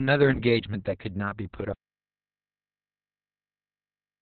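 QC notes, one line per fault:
throughout, Opus voice compression: the speech sounds muffled, hoarse and faintly robotic, with nothing above about 4.5 kHz. This is Opus running in SILK mode at narrowband, which points to a bitrate around 6 kbps, with the excitation coded very coarsely.
1.73 s to the end, audio dropout to silence: the speech cuts off mid-flow, and everything after is silent with no room tone. The input was likely lost through a disconnected device or failed link while silence kept being written.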